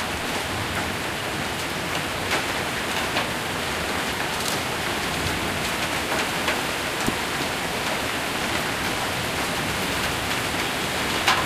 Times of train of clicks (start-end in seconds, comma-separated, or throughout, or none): 2.36-11.36